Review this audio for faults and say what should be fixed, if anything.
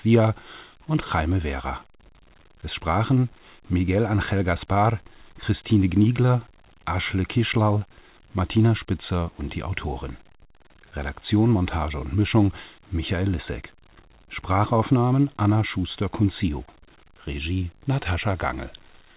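No faults turn up in this audio, so nothing needs to be fixed.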